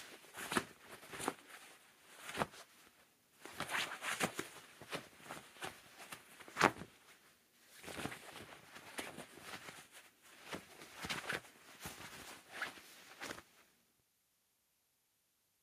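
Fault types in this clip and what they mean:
No technical faults can be heard in this recording. Nothing in the audio breaks up, drops out or shifts in a way that would point to a problem in how it was captured or carried.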